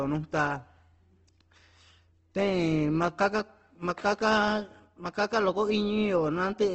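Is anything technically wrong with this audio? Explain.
Yes. Throughout the speech there is audible Opus compression, likely from a low-rate encode. Nothing remains above 8.2 kHz, and missing bands are refilled with noise rather than left empty, so tones sound grainy and rough instead of MP3-like swirling, consistent with roughly 16 kbps in music mode.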